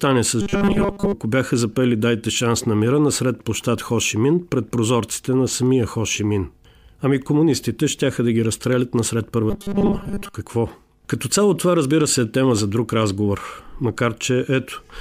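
From 0.41 to 1.14 s, just before "бяха запели", and again from 9.50 to 10.34 s, after "да ги разстрелят насред", the speech turns into a rigid metallic buzz pitched at 200 Hz. This robotic sound likely comes from repeated short buffers, with about 5 ms fragments looped while much of the real audio is skipped.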